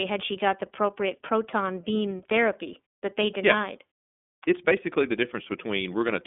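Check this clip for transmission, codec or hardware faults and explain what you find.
Two faults are present: an iLBC codec coloring the whole clip, and a brief channel delay producing comb filtering.

The iLBC codec runs throughout. Each 30 ms frame's excitation is coded independently, which fits the 13.33 kbps mode. The speech sounds clear but slightly rough and synthetic. A spectrogram shows a hard ceiling near 3.8 kHz, with the energy concentrated roughly between 200 Hz and 3.5 kHz.

Channel delay (comb filtering) occurs from 2.74 to 3.74 s. One channel lags by about a single sample, roughly 0.02 ms, before the two are summed to mono, so their shared content cancels at evenly spaced frequencies. Here the first notch sits near 20 kHz, far above the codec's ceiling, so the effect is only a dulling of the top. A spectrogram would show little change in that second.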